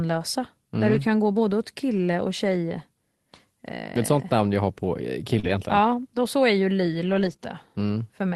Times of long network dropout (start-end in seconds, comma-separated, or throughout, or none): none